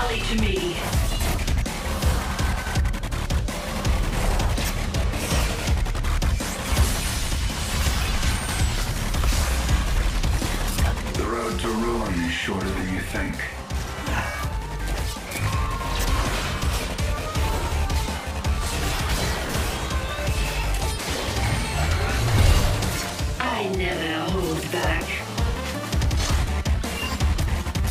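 No technical faults can be heard anywhere in the audio: the signal holds steady throughout, with no interruptions, level problems or added noise.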